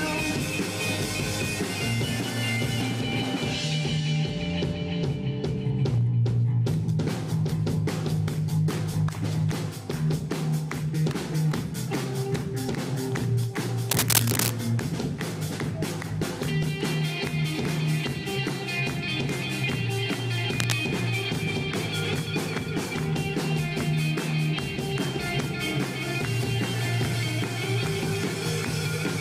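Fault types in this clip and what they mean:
Cable scratch noise: rustling bursts at 13.9 s and 20.6 s, likely a worn contact, seen as ragged broadband spectrogram smears and dense irregular waveform spikes.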